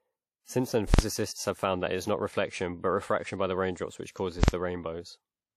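Throughout, the audio sounds washy and ringing, with hiss that breathes along with the speech and nothing above 14.2 kHz, which points to likely WMA compression at a low bitrate.

From 0.94 to 0.99 s, just before "have found that it", and again from 4.44 to 4.48 s, there are invalid numbers at full scale. Each time, a calculation fails and the output sticks flat at one extreme for about 46 ms, which fits a 2048-sample block. Unlike a click, each event is a loud bang that blots out the audio for its whole length.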